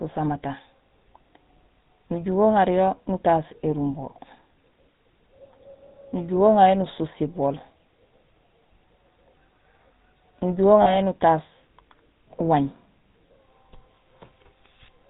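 From the start the speech carries a buzzy, gravelly roughness and nothing above 4 kHz. This is the GSM full-rate codec, which fits its 13 kbps form. It rebuilds the voice from a vocal-tract model driven by sparse, regularly spaced pulses, so the damage is plainly audible.

From 10.82 to 10.96 s the sound briefly freezes into a rough, metallic ring. These are lost GSM frames. About 40 ms went missing, which fits two dropped frames. The decoder repeated the last good frame's settings to cover the gap.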